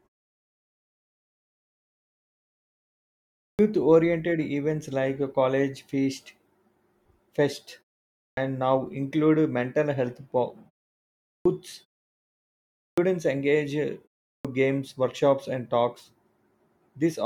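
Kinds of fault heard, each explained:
Clipped start after a pause: The output device dozes off during silence and needs a moment to wake and lock again, so the first bit of sound after each pause gets swallowed. Here speech jumps in abruptly, missing roughly 130 to 150 ms, at 3.45 s (before "oriented events like a"), 8.24 s, 11.31 s, 12.83 s (before "engage uh") and 14.3 s. The cut happens even after pauses as short as 0.31 s.
Gap at a join of encoded pieces: When audio is encoded in separate chunks and stitched back together without trimming, each chunk's encoder start-up delay and final-frame padding stay in, leaving a tiny hole. You can hear it at 14.08 s, just after "engage uh": a 24 ms dropout with smeared edges, after which the speech picks up right where it left off. The spacing fits pieces joined about every 6 s.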